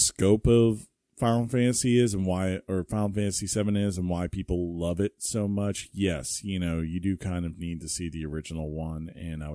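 Nothing in this speech clip stands out as a technical fault; there's no moment where anything goes wrong with the sound.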